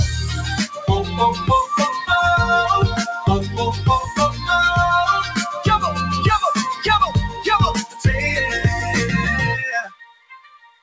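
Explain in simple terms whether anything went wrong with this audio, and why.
Throughout the clip, the sound keeps swelling and shrinking in loudness, as if someone were nudging a volume knob up and down. Sharp starts come through, but held or fading parts sag and thin out. This is a noise suppressor applied to music or sounds: a filter meant to clean up background hiss in phone calls was left switched on, and it mistook steady, lingering sound for noise and kept turning it down.

At four moments the dip is deeper: briefly from 0.67 to 0.85 s, from 7.29 to 7.44 s, and from 7.85 to 8.05 s, and then from 9.83 s to the very end, where the tail sinks furthest of all. Each is a sound cut by the noise suppressor. The filter judged those stretches to be noise and pushed them down harder than the rest.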